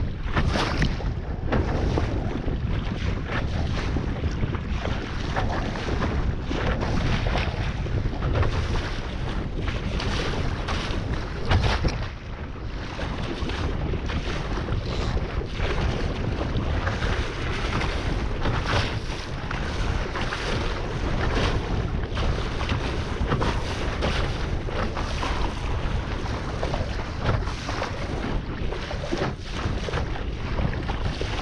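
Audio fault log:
No faults were found in the audio. Nothing in it calls for a timestamp or a further entry in this log.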